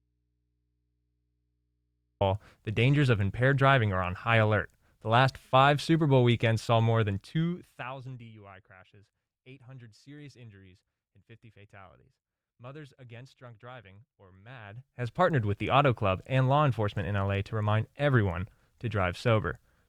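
Right from the top, the clip is already in an audio dropout to a faint residue. For the first 2.21 s there's no speech at all, just low mains hum sitting roughly 50 dB under the normal level. The speech then snaps in abruptly with "the dangers of impaired", not faded up. The likely cause is the source feed breaking while the input after it stayed open, picking up hum until the signal returned.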